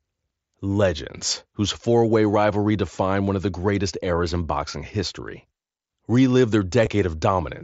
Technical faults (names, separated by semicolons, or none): concealed Bluetooth headset packet loss